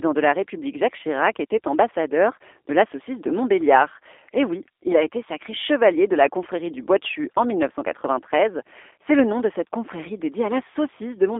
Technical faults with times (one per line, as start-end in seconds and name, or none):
0.00-11.39 G.729 codec